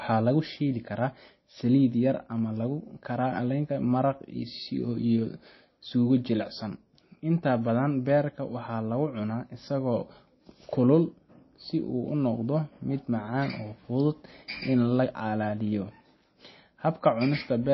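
Speech with MP3 compression damage running through the whole recording, plainly audible from start to finish. Nothing comes through above about 5.8 kHz, so sibilants sound dull, and the remaining band has a watery, swirly quality as weak frequency components flicker on and off between frames. That swirl separates it from a simple low-pass filter, which would dull the top without the shimmer. This is likely a very low encoding bitrate, around 24 kbps.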